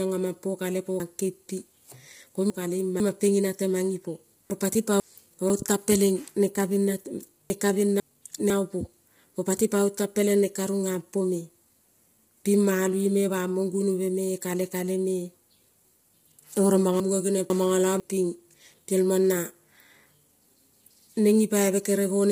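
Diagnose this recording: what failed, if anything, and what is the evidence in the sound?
Codec stage. Throughout the 22 s of speech the sound is rough and grainy, with noise filling the gaps between harmonics and a thin, synthetic-sounding top band. The damage is heavy. The likely cause is low-delay AAC compression (AAC-ELD). Its short frames resolve pitch harmonics poorly, and at the starved bitrate this degree of grain points to, around 24 kbps, the encoder cannot spend enough bits to keep the spectrum between harmonics clean.

Buffer or storage stage. There are four jumbled moments where chunks play out of order. The first runs from 1.0 to 3.0 s, right after "aman po kale po". Here a 500 ms chunk lands three chunks late. Single-chunk swaps follow at 4.5 to 5.5 s, just before "tan pelen", at 7.5 to 8.5 s, and at 17.0 to 18.0 s, after "oro mono". No audio is lost. A late-written block simply displaces its neighbours, creating three discontinuities each time.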